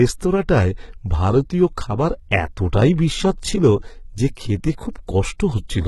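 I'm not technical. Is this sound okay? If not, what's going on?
No. The whole recording sounds gritty and lispy on s sounds, with fake-sounding treble. That's likely heavy HE-AAC compression rebuilding the high frequencies from lower ones.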